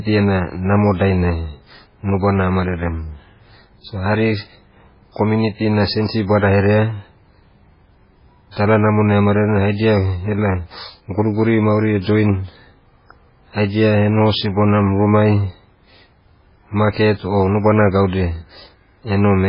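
Speech, watery and swirly throughout, with nothing above 5.3 kHz and smeared consonants, likely from heavy MP3 compression at a very low bitrate, around 16 kbps.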